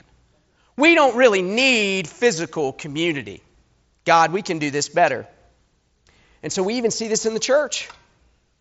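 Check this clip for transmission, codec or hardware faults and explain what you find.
No faults found here.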